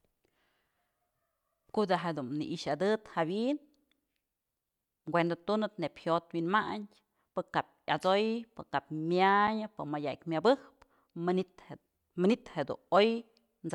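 Speech recording with one block of digital silence at 9.47 s: the output buffer apparently went unfilled, zeroing about 5 ms, consistent with a 256-sample buffer, heard as a tick.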